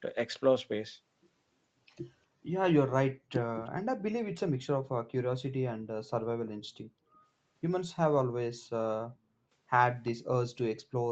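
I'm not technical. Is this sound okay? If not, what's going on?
No. At 3.65–3.70 s, 6.46–6.51 s and 10.05–10.11 s there is an echo leak: faint scraps of the speech repeat 345 ms late, likely from a speakerphone whose echo canceller missed them. The last scrap is louder.

At 5.8–5.91 s and 10.74–10.86 s the room background briefly drops out. This is background gated by the echo canceller, which turned the microphone down while the loudspeaker played. The second drop is deeper.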